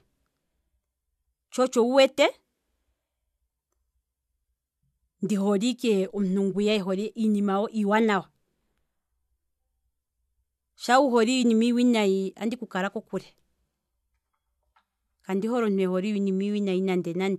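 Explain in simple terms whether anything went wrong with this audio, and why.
Nothing went wrong; the recording has no audible faults.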